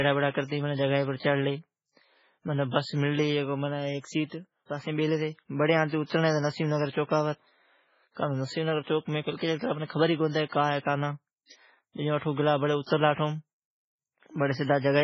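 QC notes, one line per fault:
Throughout, MP3 compression: heavy damage across the speech, with nothing above about 7.6 kHz, so the top end sounds dull. Weak frequency lines flicker on and off between frames, giving a watery, swirly texture and metallic chirps on s sounds. Attacks smear. This fits a bitrate near 16 kbps, likely from a starved encoder.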